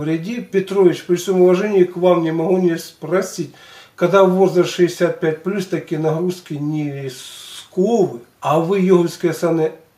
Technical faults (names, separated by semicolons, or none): none